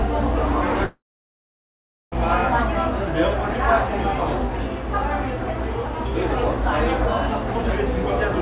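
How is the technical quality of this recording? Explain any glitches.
The recording has one clear glitch: a gap of about 1.3 seconds near the start of this everyday sound recording, heard through a narrow call-quality band with nothing above 4 kHz, which fits G.711 mu-law coding.

From 0.84 s to 2.14 s there is what sounds like a long network dropout, likely caused by packets that never arrived. The receiver stretches the last sound into a brief fading buzz, then leaves roughly 1.1 s of near-silence before the audio resumes with that stretch missing. A waveform shows a short decaying tail followed by a flat line. A spectrogram shows a smeared band that fades to an empty dark block, cut off sharply at 4 kHz throughout.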